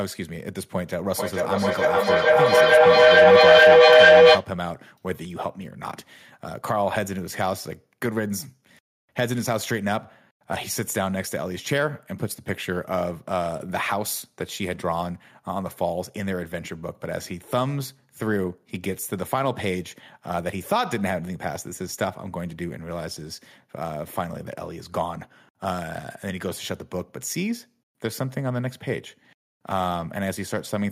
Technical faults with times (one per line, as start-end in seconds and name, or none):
1.13-4.51 feedback howl